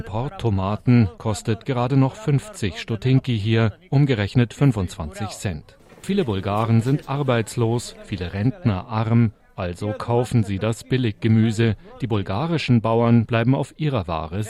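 Nothing here trips the ear at all; the audio just runs along from the first moment to the last without a single hiccup worth pointing out.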